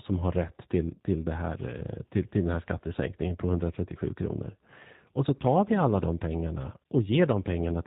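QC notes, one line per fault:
Throughout: G.729 codec. The speech is carried by a low-rate CELP coder, and the sound points to G.729A at about 8 kbit/s. Each 10 ms frame is rebuilt from a vocal tract filter, a pitch predictor and a handful of fixed pulses, so the fine detail of the waveform is lost. Everything above 4 kHz is missing, and the damage is plainly audible as a rough, slightly synthetic quality.
0.94 to 0.99 s: VoIP packet loss concealed by the speech codec. Just after "har rätt till", about 30 ms of audio went missing, which fits a single lost packet. The decoder filled the gap by repeating its last pitch period and filter with gain stepped down frame by frame, so the sound briefly turns into a stretched, fading sound. Because each frame depends on the one before, the recovery into "till det" sounds weakened for a moment.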